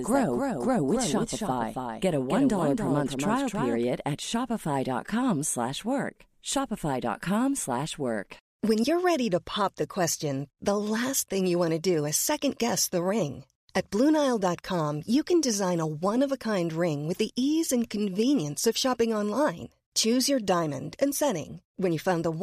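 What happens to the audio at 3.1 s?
A doubled audio track runs from the start to 3.84 s: a full-band copy trails about 0.3 s behind, a few dB quieter, likely from a slower second capture path.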